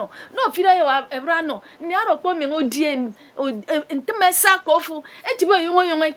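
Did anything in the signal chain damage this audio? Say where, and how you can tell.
Yes. At the network stage, with recovery in the codec, there are lost packets rebuilt from error correction at 1.37–1.43 s, 2.51–2.65 s and 4.57–4.79 s. The rebuilt stretches are 40, 80 and 120 ms, which fits runs of roughly two, four and six packets. The decoder filled each gap with a low-bitrate backup copy, so nothing drops out, but the speech turns briefly rough and noisy. On a spectrogram these spans show smeared, grainier harmonics and a raised noise floor. The waveform has no gap.

In call processing, an echo leak appears at 1.65–1.79 s. A very faint delayed copy of the speech, roughly 40 dB below it, trails the original by 396 ms. This is likely a far-end loudspeaker echo that the echo canceller did not fully remove. A spectrogram would show faint harmonic traces shifted in time behind the main ones.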